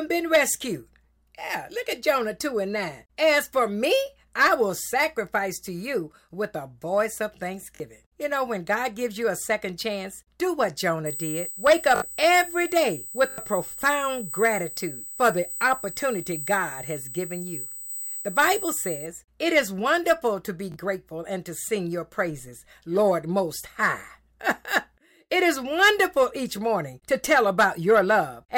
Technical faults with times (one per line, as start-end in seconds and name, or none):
7.76-7.80 repeated buffer
11.06-19.06 USB whine
11.96-12.02 repeated buffer
13.30-13.38 repeated buffer
20.72-20.76 repeated buffer